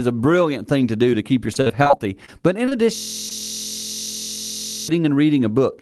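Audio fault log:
1.53–2.30 s, repeated packet loss (robotic sound): seven packets went missing in quick succession, the longest gap 44 ms. The receiver patched each by extending the previous sound, so about a fifth of this stretch is synthetic, giving a choppy, robotic texture with fragments dropped.
2.66–2.73 s and 3.29–3.40 s, short concealed packet loss: two back-to-back 20 ms losses, then one more, never reached the decoder in time. Each hole was filled by continuing the last sound and blending back, heard as a brief smear or wobble; the later fill adds roughly 15 ms.
2.96–4.88 s, system hang loop: the computer or driver stalled while the sound hardware kept replaying the same 23.22 ms block, which fits a 1024-sample buffer. Repeating at 43.1 Hz for almost two seconds, it becomes a steady, mechanical buzz in place of the real audio.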